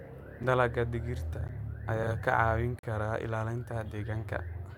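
At 0.43 s and 1.48 s, blocks of digital silence, roughly 6 and 11 ms long, sound as ticks. The output dropped to zeros with no fade, the second gap fitting an unfilled 512-sample buffer.

From 2.03 to 2.12 s, frames out of order: two 40 ms blocks of two frames each swapped places, giving a garbled flutter but no lost time, unlike a dropout.

At 2.79 to 2.83 s, just before "kara ilaalinta", a longer block of digital silence, about 43 ms and consistent with a 2048-sample buffer, is heard as a brief hole.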